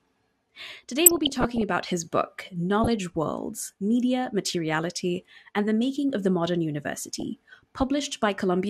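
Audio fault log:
1.04 to 1.62 s, 2.84 to 2.97 s and 7.15 to 7.23 s, DAB burbling: bubbly, squelchy chirps right before "about his book", again just after it, and briefly near the end. Weak reception let bit errors slip past error correction, so single MP2 sub-bands jump in level frame by frame. The longest burst points to a somewhat higher error rate.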